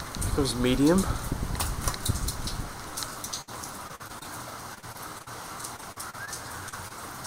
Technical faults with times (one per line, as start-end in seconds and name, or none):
3.41-3.49 burst of packet loss
3.87-4.26 repeated packet loss (robotic sound)
4.74-5.28 repeated packet loss (robotic sound)
5.76-6.29 repeated packet loss (robotic sound)
6.69-6.92 short concealed packet loss